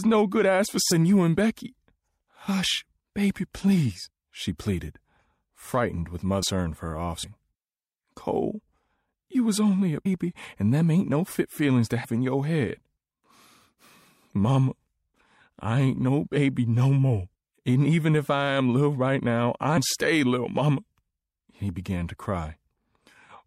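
At 0.90, 6.42, 7.23, 10.05, 12.03 and 19.76 s the sound jumps forward with a short, smeared blip rather than a sharp click, dropping roughly 150, 400, 200, 150, 150 and 300 ms of material respectively. These are compressed frames skipped: runs of frames were lost or rejected by the decoder, so playback leapt ahead by whole frames, and the jump sizes fit a frame length near 26 ms. The overlap between neighbouring frames blurs each join.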